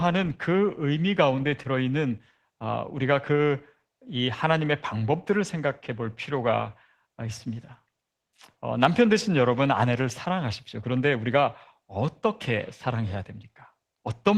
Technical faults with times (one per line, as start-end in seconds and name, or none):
0.00-14.38 Opus voice compression